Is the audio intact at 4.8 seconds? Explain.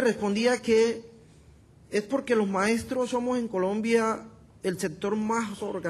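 Yes, the audio is intact at 4.8 seconds, with no fault audible at that moment.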